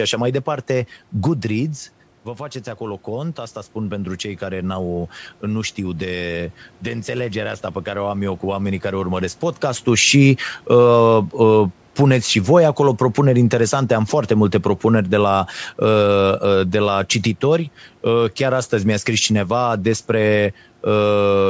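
From 2.36 to 9.43 s, speech and background swell together by about 6 dB: automatic gain rising after the input dropped about 9 dB.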